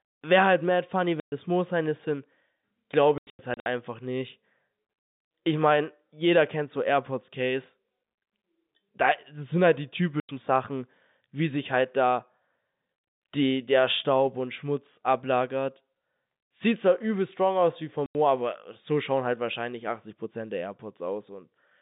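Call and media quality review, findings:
Packet loss filled with silence: hard-edged dropouts, fitting 30 ms packets, at 1.2 s after "halt mad funny" (120 ms), scattered gaps from 3.18 to 3.66 s, at 10.2 s after "sind halt die", and at 18.06 s before "aber so schauen halt". Flat near-silent waveform gaps, blank vertical spectrogram columns.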